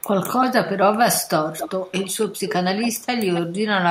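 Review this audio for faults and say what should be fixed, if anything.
Echo leak at 0.0–0.04 s, 1.57–2.54 s, 2.81–3.06 s and 3.35–3.41 s: a delayed copy of the speech returns about 270 ms late, fairly loud except for the faint first scrap (near 300 ms). The far end's echo canceller likely passed loudspeaker pickup back. Using headsets or retuning echo cancellation there would prevent it.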